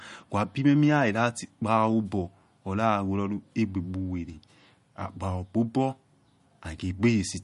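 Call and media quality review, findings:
MP3 compression, whole clip. Plainly audible codec damage: watery, swirly texture on the speech, metallic chirping on s sounds, smeared consonant onsets. Nothing above 11.2 kHz. Likely an MP3 encode starved of bits, consistent with roughly 48 kbps. Encoder lowpasses the treble at a fixed point and drops weak spectral lines, which flicker on and off frame to frame.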